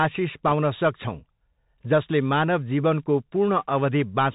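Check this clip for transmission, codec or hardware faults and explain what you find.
Two faults are present. The whole clip runs through a Bluetooth CVSD headset codec, and a short burst of bit errors on the Bluetooth voice link hits it once.

The CVSD headset codec is audible from start to finish. The coder sends one bit per sample, each saying only up or down, and its step size adapts to the signal. The sound fits a 64 kbps CVSD stream. Nothing above 4 kHz survives, so the speech is narrow and boxy. The damage is plain. Loud, bright sounds move faster than the step can follow and distort, s sounds turn scratchy, and a grainy hiss sits under the speech.

Bit errors on the Bluetooth voice link occur from 0.47 to 0.52 s. Bits in the CVSD stream were flipped. The error rate is roughly one and a half percent. Because every CVSD bit carries the same small weight, a wrong bit nudges the waveform only slightly and the error fades quickly. 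There is no sharp click. Instead, that short stretch gains a rushing, crackly noise on top of the codec hiss.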